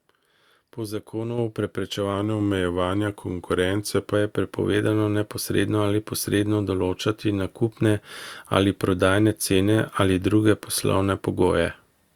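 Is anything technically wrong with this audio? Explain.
Yes, there are two kinds of fault in this speech clip.

A microphone volume stepped up at 1.38 s and again at 4.44 s: the call software judged the input too quiet and raised the device gain in a single jump, about 5 dB the first time and about 1 dB the second. Voice and background noise both get louder at once.

A drift correction step runs from 2.14 s to 4.14 s. The speech plays about 5.4% slower and drops roughly 97 cents, close to a semitone, before snapping back. The likely cause is clock-matching software suddenly changing the playback rate to rebalance its buffer.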